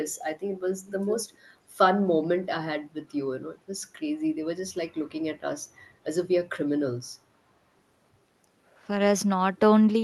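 From 0.87 to 1.16 s, a faint copy of the speech trails the original by 415 ms. It sits well below the direct speech. This is an echo leak, likely from a loudspeaker at the far end whose echo canceller let some returning sound through.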